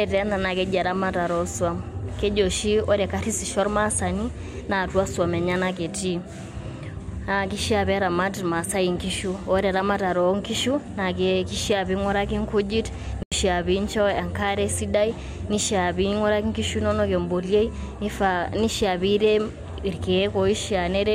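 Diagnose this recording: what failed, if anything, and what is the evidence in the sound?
Bluetooth dropout at 13.23 to 13.32 s: the speech cuts to silence for 87 ms, then resumes further along, as though it had kept playing. The likely cause is the wireless link failing to deliver a short run of packets to the headphones in time.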